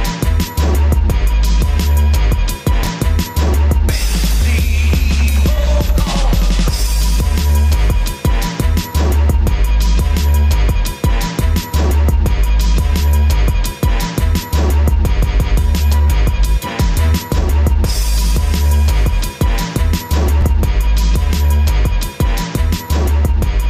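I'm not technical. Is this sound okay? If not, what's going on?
No. Twice, small slices of the sound play in the wrong order: at 2.83 to 2.87 seconds, and at 20.41 to 20.43 seconds. This fault is called chunks out of order. Each slice is about 12 milliseconds long and arrives one or two slices late. Nothing goes missing, but the shuffle causes a brief jumbled moment.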